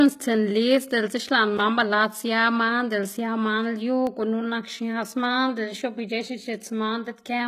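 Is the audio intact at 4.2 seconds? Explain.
No. The moment falls inside a run of CD scratch ticks lasting from 3.88 to 4.26 s. A scratch or blemish on the disc has destroyed more data than the player's error correction can rebuild, so the player patches or mutes the lost samples once per disc rotation. That produces three short ticks across the span, the longest well under a millisecond, each a brief click or tiny gap in the speech.

The same instant also carries the damage present through the whole clip, which sounds like HE-AAC compression, likely at a low bitrate, on the order of 20 kbps. The upper spectrum is not coded directly but regenerated by copying lower bands upward under a coarse envelope, so the treble is synthetic and its harmonics don't align with the lower range. The artefacts are plainly audible, with gritty, lispy sibilants, and nothing is present above 14.9 kHz.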